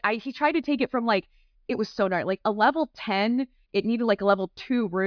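A short speech recording with nothing technically wrong with it.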